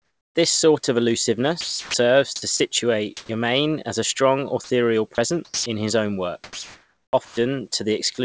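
From the start to 0.35 s, the sender has likely gone quiet under discontinuous transmission, and the receiver fills the pause with comfort noise in place of the background. The real room tone, already about 49 dB below the loudest speech, is replaced by a smooth, featureless hiss about 10 dB quieter, so the clip opens on an oddly flat, dipped floor.

From 1.61 to 2.60 s the speech is chopped by the voice detector, which likely toggled between sending and muting several times. About 420 ms of that second is swapped for synthetic noise. Quiet syllables and word edges vanish.

At 3.17 to 3.29 s comfort noise again stands in for the background, likely while transmission was paused. This time the fill is about 18 dB louder than the surrounding floor, which sits about 48 dB below peak, so a brief burst of hiss jumps out before the speech resumes.

Overlapping that, from 3.26 to 3.29 s, the onset is clipped by the voice detector. 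It was likely slow to register that speech had restarted, so the first 30 ms never went out. The word bursts in abruptly without its soft attack.

Between "as a strong" and "in his own", 4.64 to 5.66 s, the sound is chopped by the voice detector once more. The detector likely kept dropping low-level passages, with about 300 ms replaced by noise. The phrase sounds gapped and stuttering.

After "in his own", from 6.44 to 7.37 s, comfort noise replaces the background for about 810 ms, likely because the sender judged this stretch silent. The natural ambience gives way to a steady, textureless hiss.

Inside that stretch, at 7.25 to 7.37 s, sound is dropped by the voice detector. It likely mistook quiet speech for background, and about 70 ms of it is lost under the noise fill.

At 8.15 to 8.18 s sound is again dropped by the voice detector, likely on a faint tail it treated as silence. About 30 ms of speech disappears into noise right at the end.

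Throughout, the call codec carries nothing above 8 kHz, which fits a wideband codec such as G.722.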